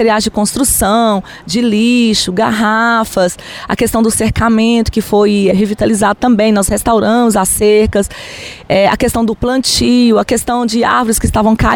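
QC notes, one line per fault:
5.51–5.62 s, skip ahead: around 0.4 s of audio never plays, and the sound on either side is butted almost directly together with no silence or fill inserted, only about 14 ms trimmed at the join. Later audio was already queued when this stretch was dropped, either lost in transit or discarded from an overfull jitter buffer, so playback leaps forward abruptly. The sound seems to lurch, and the timeline shortens by that amount.
6.16–6.92 s, jitter buffer speed-up: over this three-quarter-second span the sound runs at about 106% speed while the pitch stays unchanged. The receiver held more queued audio than its target, so it shaved out small slices of one or a few pitch periods in quick succession, about 50 ms in total, to shrink the delay. The result is a brief hurried, slightly rushed feel.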